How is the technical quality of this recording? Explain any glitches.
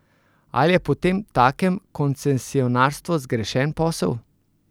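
No glitches can be heard anywhere in this speech recording. There is nothing technical here that needs explaining.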